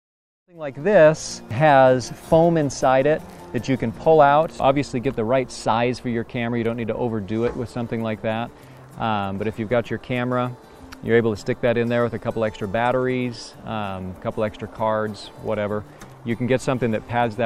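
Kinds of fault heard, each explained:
No kinds of fault are heard in this clip.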